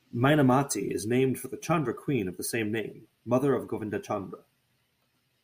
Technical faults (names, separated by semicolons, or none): none